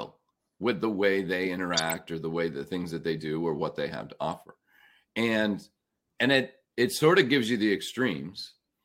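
Speech with two corrupt frame decoded faults: flipped bits in compressed frames were decoded anyway, misplacing energy. From 1.73 to 1.92 s, between "with the way they" and "or the way the", a loud glitch appears. At 4.32 s, after "what they have to", there is a faint glitch. A spectrogram would show both as brief vertical smears of stray energy.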